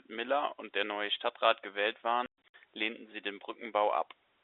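The speech has packet loss filled with silence between 2.26 and 2.54 s. Across that 280 ms span, about 200 ms of sound is missing. The gaps come in bursts, and the longest is 120 ms. Each hole starts and stops abruptly. The gap lengths fit lost 20 ms packets. The receiver inserted dead silence rather than concealing the losses. The audio is narrowband G.711 telephone coding, limited to roughly 300 Hz to 3.7 kHz.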